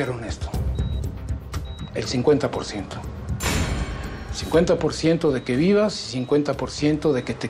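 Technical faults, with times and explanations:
No technical fault can be heard anywhere in the audio, and the signal runs without any break, dropout or added disturbance.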